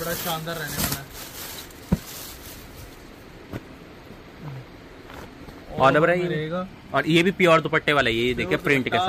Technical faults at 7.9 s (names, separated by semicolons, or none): none